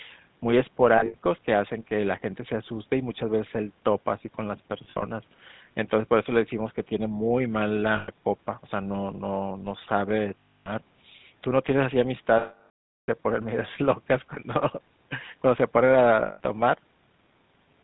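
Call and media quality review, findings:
GSM full-rate codec, entire clip. Buzzy, gravelly roughness on the speech and a hard ceiling at 4 kHz. Consistent with GSM full-rate around 13 kbps. Mechanism: the encoder models the vocal tract and excites it with regularly spaced pulses, keeping only every third excitation sample. That coarse excitation produces the grainy buzz, and the band-limiting removes everything above 4 kHz. Degradation is plainly audible.

Lost GSM frames at 0.98–1.16 s, 4.84–5.03 s, 7.96–8.10 s, 10.38–10.73 s, 12.38–13.09 s and 16.26–16.41 s. The speech freezes into a rough, metallic ring. Cause: the decoder conceals bad frames by replaying the last good frame's parameters at falling level. The first two events are scattered gaps of about 100–120 ms in total, with the longest run about 70 ms. The 12.38 s event runs 700 ms, so the ring is cut to silence well before the audio returns.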